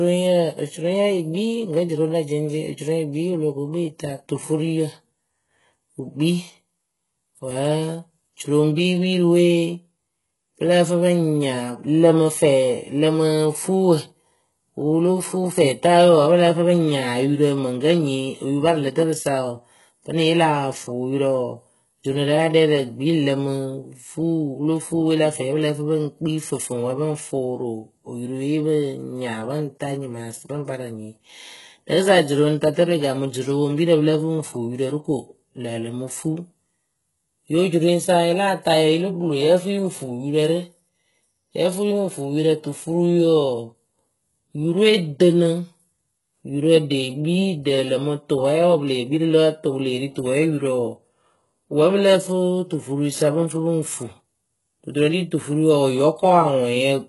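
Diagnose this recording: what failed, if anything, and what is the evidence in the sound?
Codec stage, likely HE-AAC compression near 12 kbps: treble is copied up from lower bands, so s sounds turn gritty and metallic throughout, with nothing above 11.5 kHz.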